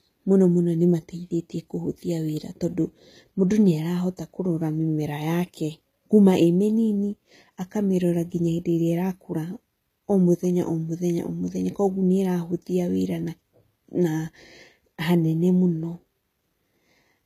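Throughout the clip the speech has been squeezed to a low bitrate, likely by HE-AAC compression at around 20 kbps. Only the lower spectrum is properly coded, and the treble is rebuilt from copied lower bands. So s sounds turn gritty and lispy, with nothing above 14.9 kHz.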